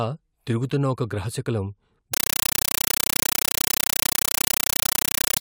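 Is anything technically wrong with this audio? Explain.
Yes. From 2.14 s, right after "తిరుగుతున్న ఒక గ్రహశకలం", the speech becomes loud chattering static: 8 ms noise bursts at 31.25 Hz, an undecoded AC-3 stream played as samples (compressed stream played as audio).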